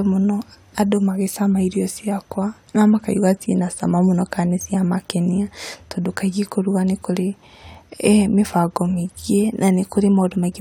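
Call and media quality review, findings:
No faults found on review of the speech audio; nothing to action on this ticket.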